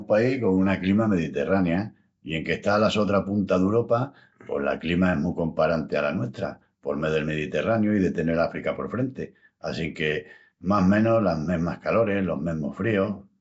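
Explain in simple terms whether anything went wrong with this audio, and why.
Nellymoser compression, from start to finish: the speech has a rough, hissy fuzz around it and a smeared, underwater feel, and nothing is heard above about 7.7 kHz. The likely cause is the old Flash microphone codec, which chops the sound into short blocks and gives each only a small, fixed budget of detail. Weaker frequency bands get nothing and are filled in with noise, which creates that grainy halo.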